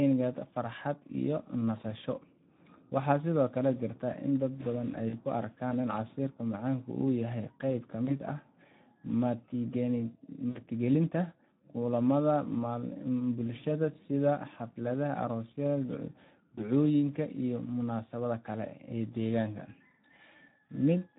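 Throughout, the speech carries Speex codec damage: a hoarse, noisy grain. The CELP coder has too few bits for the excitation, which fits a setting of about 11 kbps. Above 8 kHz the band is only a shaped noise-like fill.

Packet loss concealed by the speech codec affects 5.09 to 5.16 s (40 ms lost), 8.05 to 8.13 s (20 ms), 10.49 to 10.59 s (60 ms) and 16.55 to 16.65 s (20 ms, just before "iyo munaasabada"). At each point the decoder extends the last pitch and filter into a fading buzzy tone or coloured noise, and the speech stays weak briefly after packets resume.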